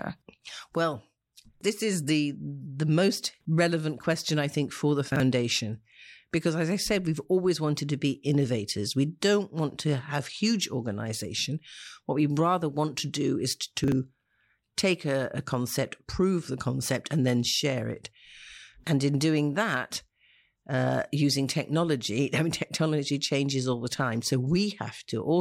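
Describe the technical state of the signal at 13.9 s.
Chunks out of order from 13.84 to 13.92 s: one 40 ms chunk plays a chunk late, giving a jumbled stutter with nothing missing, unlike a dropout.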